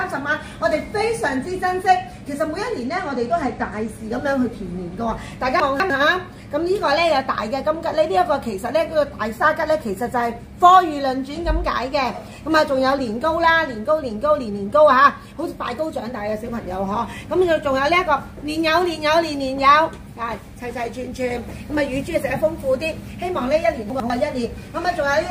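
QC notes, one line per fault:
2.86–3.89 s, Bluetooth SBC bit pool drop: for about a second the treble goes dull and a gritty grain rises, then clears. The encoder was starved of bits, leaving the top sub-bands nearly empty and the rest coarsely quantised. The sound fits the bit pool falling from 28 to 12, roughly 96 kbps.
5.6–5.9 s and 23.9–24.1 s, chunks out of order: a 100 ms block plays late, by two blocks in the first event and one in the second. Nothing is missing, but the sequence is scrambled, so each spot sounds briefly jumbled at the hard joins.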